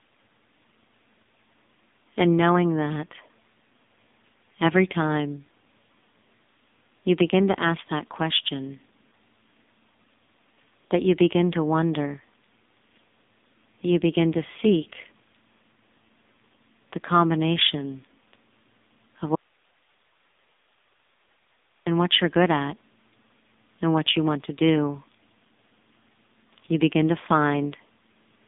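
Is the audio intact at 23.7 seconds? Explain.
No, the AMR narrowband mobile codec runs throughout, coding the speech very coarsely, consistent with about 5.9 kbps, so at 23.7 seconds it sounds buzzy and synthetic, with nothing above 3.8 kHz.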